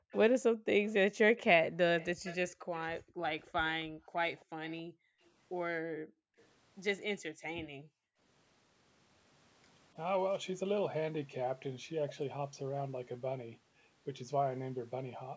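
Right from the start, 0.0 to 0.66 s, the room sound gets ducked by the echo canceller: background gated by the echo canceller, with the floor dropping by as much as about 40 dB for a fraction of a second. From 0.11 to 3.46 s there's an echo leak, a faint copy of the speech trailing 271 ms behind, well below the main voice, likely from the far end's loudspeaker sound getting past its canceller and being sent back. The same gating returns from 2.55 to 6.37 s, knocking out the background for a second or more in total. The echo pokes through again briefly at 4.37 to 4.73 s, then very faintly from 6.4 to 7.66 s, still at that 271 ms lag. A last gated stretch runs 7.3 to 8.19 s, where the room sound vanishes for under a second while the canceller clamps down.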